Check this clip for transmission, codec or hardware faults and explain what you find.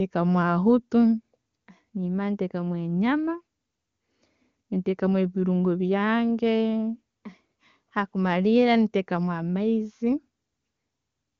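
No transmission, codec or hardware faults can be heard.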